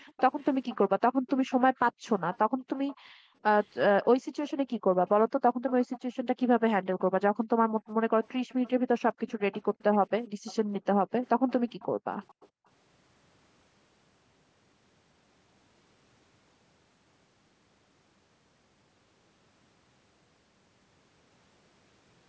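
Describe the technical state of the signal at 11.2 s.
At 11.2 s the background is gated by the echo canceller. Between 10.28 and 12.66 s it clamps the microphone while far-end sound plays. The room sound dips by up to about 40 dB, dropping out for roughly a second in total.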